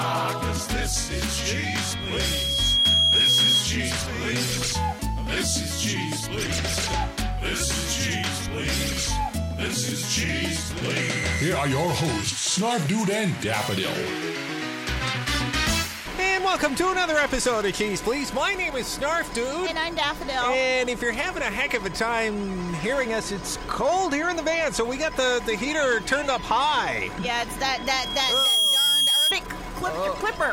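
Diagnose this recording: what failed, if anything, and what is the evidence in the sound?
Loudspeaker feedback squeal, from the acoustic loop between a speaker and the microphone that feeds it. A pure 3.3 kHz tone swells from 1.49 to 3.68 s over about a second and a half, then again from 27.76 to 29.35 s, faster, finishing a few dB above the programme. Loop gain tops unity there.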